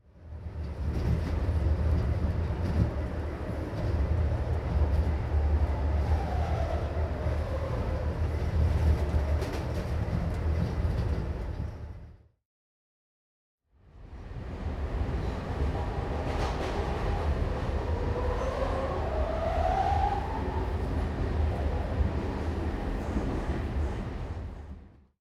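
No technical faults can be heard anywhere in the recording.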